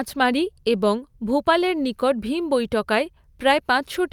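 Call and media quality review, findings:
Nothing stood out on listening to the speech in this clip.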